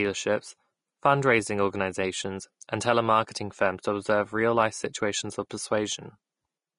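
The clip is speech, and the whole of it carries Vorbis compression damage. The treble stops dead at 10.6 kHz, with nothing above. What remains near the top turns to hiss and grain. Tones sound rough, and consonant onsets lose their edge. The damage is plainly audible throughout. It points to a low-rate encode, which fits a bitrate of around 35 kbps. The likely cause is a Vorbis encoder set to low quality, coding the fine detail as noise. There is also pre-echo at 5.50 s, just after "real life situations of". A short hiss of about 11 ms sits before a sharp onset, and the onset itself sounds softened. The codec spread its quantisation noise across the whole block. That noise leaked into the quiet moment before the attack.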